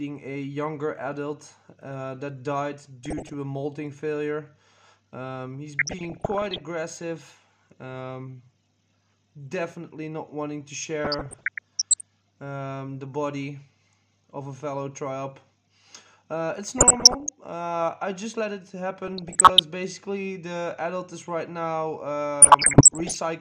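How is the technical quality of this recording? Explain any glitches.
The recording is marred by repeated DAB burbling at 3.05–3.34 s, 5.79–6.61 s, 11.05–12.01 s, 16.78–17.29 s, 19.04–19.59 s and 22.42–23.17 s. Weak reception lets bit errors, on the order of one percent, slip past error correction, corrupting scale factors so individual sub-bands jump in level for up to a frame. The result is watery blips or, in heavier patches, bubbling, chirping squelch. Unlike a dropout, burbling does not mute the audio.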